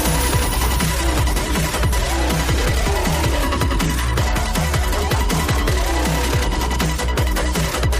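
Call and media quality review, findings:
Call bitrate drop, 1.01–4.51 s: sound turns coarse and muffled as encoder falls from 128 to 27 kbps, bottoming out about 1.7 s. Spectrogram shows high band cut off, smeared texture.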